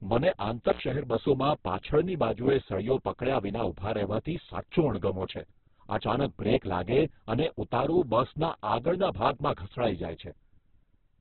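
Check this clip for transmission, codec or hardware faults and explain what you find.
One codec fault runs through the whole recording. Throughout, the speech is heavily damaged by what is likely Opus compression at a very low bitrate, around 8 kbps. Band energy is kept but filled with folded or noisy content, so it sounds grainy, rough and band-limited. On a spectrogram there's a hard ceiling at 4.3 kHz with smeared, noise-textured harmonics below.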